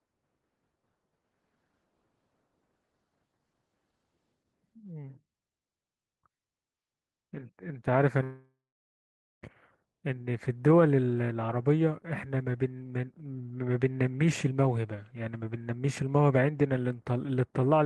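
At 8.23 s the incoming stream most likely stalled in a long network dropout, with roughly 1.2 s of audio never arriving before delivery resumed at 9.46 s. The receiver fills the gap itself: the last sound is drawn out into a buzz that quickly fades, then about 0.87 s of silence follows. The speech picks up again at 9.46 s with the lost section gone, so it jumps forward rather than continuing.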